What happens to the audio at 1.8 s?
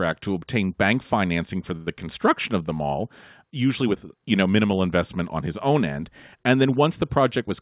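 Right there you've got a short stall from a late packet, running 1.76 to 1.89 s, just after "obtain bank financing for". A packet came in late, the jitter buffer ran dry, and the receiver stretched the last bit of sound for about 98 ms before carrying on with "construction of the mall". Nothing's lost, but that sound hangs on a touch too long.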